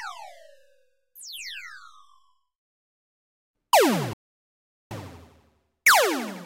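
A clip of sounds with a playback stall and a catch-up at higher speed. At 4.13 s the sound cuts out mid-flow. Silence holds for about 0.78 s, until 4.91 s. The player likely ran dry of data or had its output thread blocked. From 4.91 s to the end, playback runs fast to recover lost time. Speed is 1.15 times normal. Pitch rises by about two semitones, because the backlog is resampled rather than time-stretched.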